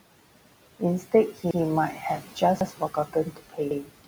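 Noise suppressor artifacts run through the whole clip. The suppressor treats the steady room noise, which sits about 17 dB below the speech, as something to remove band by band in each frame, pulling it down by about 18 dB. The background therefore drops away in the gaps between words and climbs back up underneath them.

Overlapping chunks show up at 0.41–0.51 s, 1.51–1.61 s, 2.61–2.71 s and 3.71–3.81 s. The audio was handled in pieces 1 s long, and each piece begins 100 ms before the previous one finishes, so that 100 ms stretch plays twice at every join. The regular 1.1-second spacing gives the clip a recurring stutter, each one a brief repeated slice of sound with a small jolt where the chunks meet.

Speech cut by the noise suppressor affects the stretch from 2.21 s to the end at 4.07 s. Over that span the suppressor mistakes parts of the speech for noise and turns them down with the background, by as much as about 17 dB at the deepest point. 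Around 0.4 s of speech is affected in all. The affected parts sound swallowed and faint rather than clearly formed.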